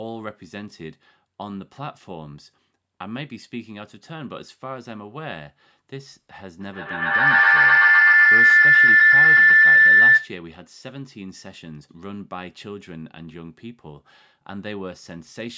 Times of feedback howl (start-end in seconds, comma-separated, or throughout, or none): 6.61-10.39